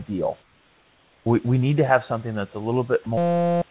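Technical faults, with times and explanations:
0.42–1.26 s, comfort noise in place of the background: for about 0.84 s before "we we need to", the room background gives way to a smooth, featureless hiss about 4 dB quieter, sitting roughly 38 dB below the loud passages. This is likely discontinuous transmission: the sender stopped transmitting during the pause and the receiver generated shaped synthetic noise, so the texture of the real room noise is lost until the sound resumes.
3.04 s, sound dropped by the voice detector: just after "have something that's a", a 20 ms slice of the signal is replaced by steady noise. The likely cause is the sender's voice detector misreading that moment as background and halting transmission, so the receiver inserted comfort noise until detection picked up again a fraction of a second later.
3.18–3.62 s, system hang loop: shortly after "have something that's a", the audio freezes into a steady buzz at 172 Hz for about 0.4 s. 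A single 5.8 ms fragment repeats identically, which fits a 256-sample buffer being replayed while the host or driver stalled. Because the loop is so short, the repetition fuses into a pitched tone rather than a stutter, and the sound that should have filled that span is lost.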